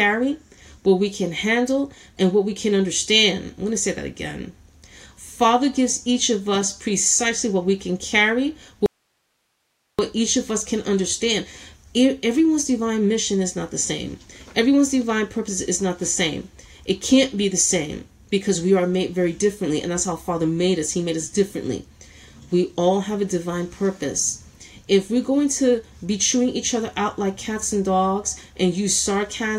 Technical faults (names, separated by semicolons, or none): audio dropout to a faint residue